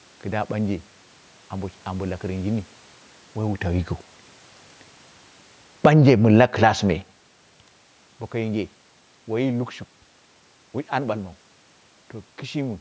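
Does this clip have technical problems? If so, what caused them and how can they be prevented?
Yes. From 5.7 to 6.64 s, automatic gain falling lowers the level by about 8 dB. The gain control judged the input too loud and eased its gain down, so speech and background sink together. Prevent it by setting the input level with enough headroom.

Overlapping that, from 5.97 to 7.0 s, automatic gain rising lifts speech and room noise together by about 5 dB over roughly a second, because the control then judged the input too quiet. Prevent it by disabling automatic gain and fixing the level manually.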